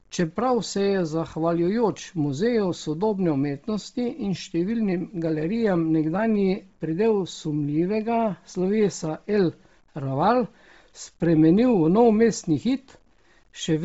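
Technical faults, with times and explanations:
Throughout, low bit depth without dither: quiet passages turn gritty, with error noise around 45 dB below the signal, likely from truncation to about 9 bits; the waveform shows stair-stepped quiet tails.
Throughout, Bluetooth LC3 compression: heavy codec damage gives a breathy, grainy edge; the spectrogram is empty above 7.7 kHz, with noise-filled upper bands, likely from low-bitrate LC3 with 7.5 ms frames.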